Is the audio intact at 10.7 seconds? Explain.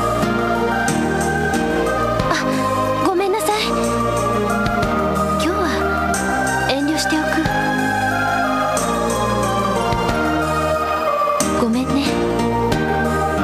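Yes, at 10.7 seconds the audio is intact, with no dropout, click, distortion or other fault to be heard at that moment.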